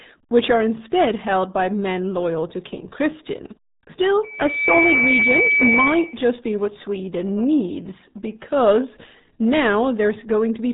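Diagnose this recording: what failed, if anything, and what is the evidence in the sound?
The speech is muffled and gargly throughout, with nothing above about 3.8 kHz and heavy damage to what remains. That places the fault at the codec stage: the RealAudio 14.4 codec, whose sound fits an 8 kbit/s dial-up-era rate, drops the upper band and coarsely models what remains.

From 4.22 s to 6.27 s a single tone near 2.3 kHz swells over roughly half a second and sits about 5 dB louder than the speech. This is a loudspeaker feedback squeal in the acoustic loop: the microphone hears its own loudspeaker, and at 2.3 kHz the loop gain exceeds one, so that frequency keeps feeding itself.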